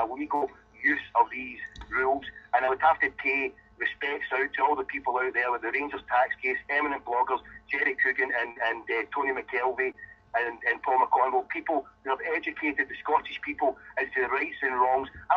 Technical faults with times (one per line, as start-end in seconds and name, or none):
0.35-0.43 burst of packet loss
2.65-2.69 short concealed packet loss
8.51-8.58 short concealed packet loss
9.92-9.95 short concealed packet loss